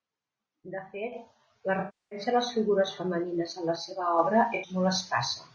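The whole speech clip sounds rough and grainy, with noise between harmonics and a thin top end, likely low-delay AAC compression at around 32 kbps.

From 1.79 to 2.19 s, between "fet la" and "a les figures femenines", AAC frame loss with concealment smears the sound into a noisy patch that decays and recovers. Another short phasey smear follows at 4.55 to 4.69 s.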